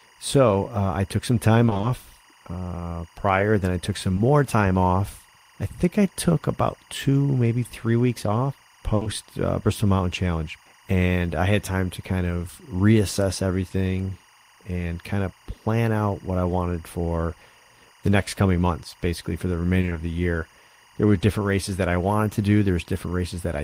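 This speech recording carries timecode bleed for its whole length. A square-wave code at 24 frames per second warbles between two tones near 1 kHz and 2 kHz, about 30 dB below the speech. It suggests linear timecode leaking in from a neighbouring track or cable. Repeated packet loss (robotic sound) hits twice. From 1.65 to 1.85 s, after "uh I took some", five gaps of up to 20 ms each chop the sound. Half of that stretch is patched by continuing the last sound. From 19.81 to 19.97 s, between "months basically for the" and "the year", four such gaps do the same, again concealing half the span. Short concealed packet loss occurs at 4.15 to 4.19 s and at 9.03 to 9.07 s, just after "maybe three weeks off". Each time, 20 ms never arrived. The receiver filled it by extending the preceding sound, then blended back into the real audio. The result is a brief smear or wobble. A burst of packet loss runs from 8.95 to 9.03 s. 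There, 60 ms is lost and replaced by the last sound, fading as the gap continues. This gives either a held buzz or a fading hiss before the audio resumes.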